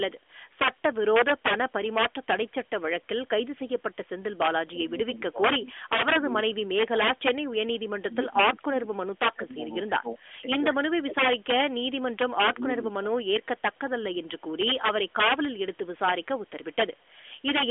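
Integer overflow runs through the whole recording. The speech was driven about 11 dB past the largest integer value. A small share of samples went over, and instead of being limited they wrapped to the opposite sign. Each such peak jumps across the full range. The result is sharp cracks where the speech peaks, sharper than ordinary clipping. The narrowband mobile coding is audible as a bandwidth limit, with nothing above 3.7 kHz.

From 7.64 to 11.16 s the speech drops out in places, about 2 s in total, by around 20 dB at its deepest. From 12.27 to 14.26 s it happens again, about 1.5 s in total, down by around 25 dB. This is likely speech suppressed in double talk. The far side was playing on the loudspeaker while this side spoke. The echo canceller could not tell the talker from the echo and turned both down.

Echo leak follows at 14.39 to 14.5 s, 15.09 to 15.13 s, and 15.74 to 17.43 s. 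A copy of the voice the loudspeaker side played comes back 238 ms late, roughly 40 dB below the main speech. The first two are brief scraps. The last lasts almost 2 s. The likely cause is an echo canceller on the loudspeaker side that left part of the microphone pickup in place and sent it back.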